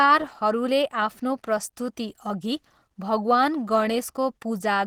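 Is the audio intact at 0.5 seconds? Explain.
No. At 0.5 seconds the speech is marked by Opus compression, which runs through the whole clip. The sound is muffled, hoarse and grainy. This points to the codec's hybrid speech mode. That is likely a low bitrate near 16 kbps, which starves bands.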